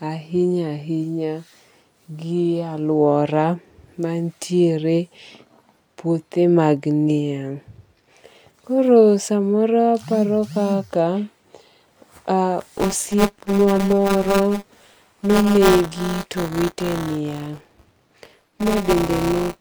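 Buffer tearing from 12.61 s to the end: writer and reader cross each 5 ms period, splicing in about a tenth of stale audio, heard as a 200 Hz robotic buzz.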